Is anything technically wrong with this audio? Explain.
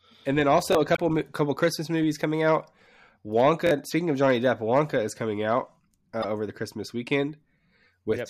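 Yes. The speech clip has two kinds of fault.

Repeated buffer at 0.73 to 0.75 s and 3.67 to 3.71 s: new audio arrived late, so the device replayed its last block of about 21 ms, which fits a 1024-sample buffer. The first event repeats it once and the second twice, giving a brief stutter with hard joins. About 20 ms and about 40 ms of audio are lost.

Damaged data in a compressed stream at 0.93 to 0.99 s, 3.30 to 3.33 s and 6.22 to 6.25 s: corrupted bytes made the decoder misread frames and lose sync, producing short chirps or blips.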